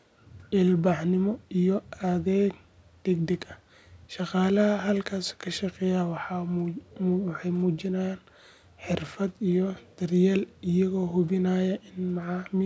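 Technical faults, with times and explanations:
No technical faults are audible anywhere in this speech.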